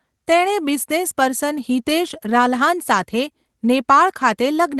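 The speech reaches the listener through the WebRTC call path just as that path is meant to work, with the Opus coding holding the high end to a top of about 12 kHz and nothing in the signal going wrong at any point.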